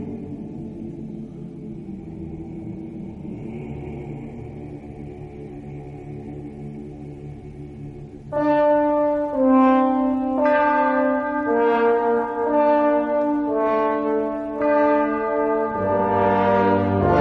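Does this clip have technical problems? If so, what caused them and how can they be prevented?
No technical problems are audible.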